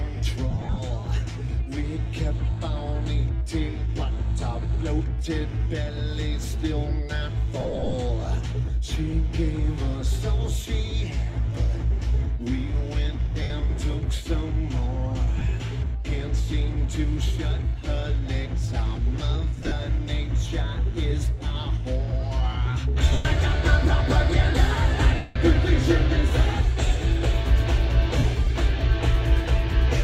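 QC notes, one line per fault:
0.51–0.78 s, 7.60–7.94 s, 13.42–13.50 s, 15.38–15.46 s, 19.58–19.72 s, 23.13–23.25 s, 25.15–25.36 s, 28.18–28.24 s: lost LE Audio frames. Tones smear into brief noisy hash and the longer gaps sag toward silence. The LC3 decoder repeats the last spectrum with scrambled signs and fades it as the losses run on.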